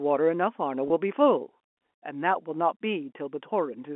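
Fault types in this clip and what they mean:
Packet loss with pitch repetition: a missing 20 ms stretch was bridged by repeating the last pitch period, leaving a held, buzzy sound at 0.88–0.90 s.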